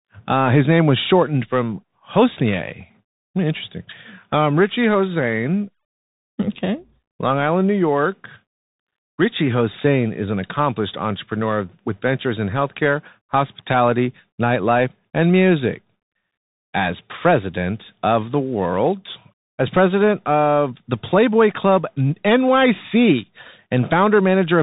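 Throughout the speech, everything above 3.8 kHz is gone, s sounds come out scratchy, loud bright passages distort, and a grainy hiss sits underneath. It is the Bluetooth CVSD headset codec. Its one-bit up-or-down steps, consistent with 64 kbps, cannot keep pace with fast waveforms.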